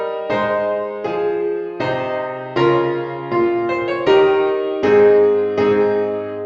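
Nothing in the clip stood out as a technical problem on listening.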